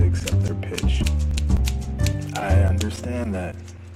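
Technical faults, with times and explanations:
1.37–1.39 s, damaged data in a compressed stream: corrupted bytes make the decoder misread frames and lose sync, giving a brief disruption in the sound.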